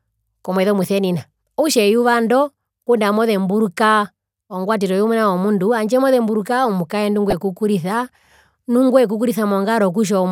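From 7.30 to 7.33 s a brief burst of burbling breaks through the speech. This is DAB burbling: under weak reception, a low bit error rate of a fraction of a percent slipped past error correction, putting short blips of noise into single sub-bands.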